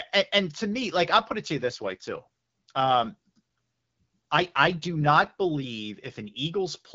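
From 1.61 s, right after "put it to you", the speech turns rougher and more synthetic, with a grainy, buzzy edge, while the bandwidth stays just as wide and nothing drops out. It recovers at 5.40 s. This is an AMR rate drop: the AMR-WB coder, clear before this point, was switched to a lower rate to free bits for error protection on a weak link. The coarser texture fits a step from 12.65 to 8.85 kbit/s.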